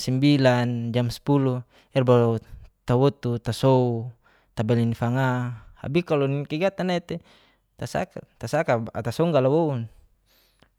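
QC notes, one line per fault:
Nothing stood out on listening to this speech clip.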